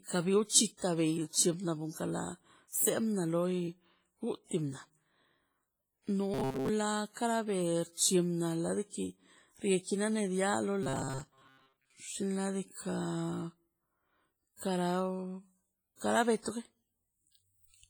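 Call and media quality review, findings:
Ringing, washy speech with hiss that breathes with the signal, throughout. Likely WMA compression: long transform blocks smear quantisation noise over tens of milliseconds and weak spectral lines are zeroed. Heavy damage, consistent with a low bitrate around 24 kbps.

Rigid metallic buzz at 133 Hz over the speech, 6.34–6.69 s (ending just before "kara be") and 10.83–11.93 s. Robotic sound from repeated short buffers, likely from audio arriving too seldom: about 7.5 ms segments replayed, most of the real audio skipped.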